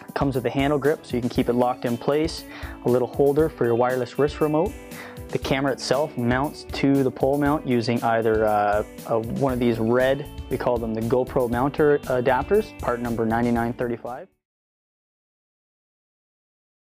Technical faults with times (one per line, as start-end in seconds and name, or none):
none